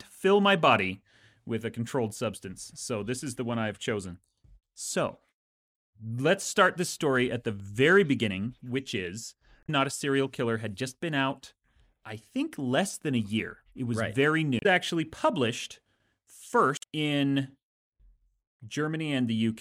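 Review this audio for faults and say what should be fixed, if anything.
Damaged data in the compressed stream produces brief glitches at 9.63–9.69 s after "very beginning which is", at 14.59–14.66 s just before "actually published", and at 16.76–16.84 s. Corrupted bytes make the decoder lose frame sync. Verify files with checksums after transfer, and keep metadata out of the audio payload.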